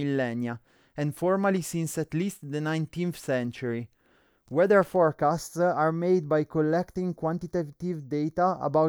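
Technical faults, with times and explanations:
4.96–8.88 s, channel delay (comb filtering): from here to the end, one channel runs roughly a fifth of a millisecond behind the other. Summed to mono, they cancel at regularly spaced frequencies, starting around 3 kHz, so the speech turns hollow and phasey.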